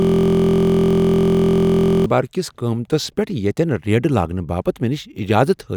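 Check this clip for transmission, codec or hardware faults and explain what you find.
A system hang loop is already under way as the clip begins and runs until 2.06 s. The computer or audio driver stalled while the sound hardware kept replaying the same small ring buffer, so a single 23.22 ms slice of speech repeats exactly, dozens of times over. That loop length fits a 1024-sample buffer. Because the slice is so short, the repetition fuses into a steady mechanical buzz at about 43.1 Hz rather than a stutter.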